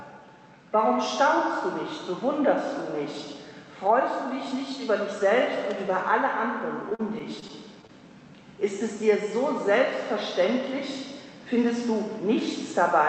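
From 6.89 to 7.91 s, repeated packet loss (robotic sound) chops the audio: seven short dropouts, the longest about 39 ms, are patched by stretching the preceding sound. On a spectrogram these show as smeared, repeated vertical slices; the waveform shows brief flattened or looped segments. The call path's content stops near 8 kHz, which fits a wideband Opus setting.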